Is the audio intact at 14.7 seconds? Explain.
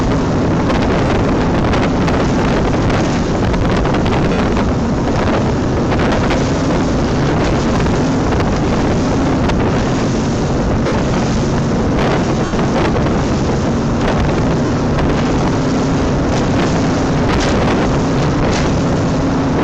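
No: lost LE Audio frames from 14.66 to 14.70 s, about 40 ms, fitting four 10 ms frames. The LC3 decoder recycles the last spectrum with random signs, so the gap becomes a brief noisy smear rather than the hard silence of a plain dropout.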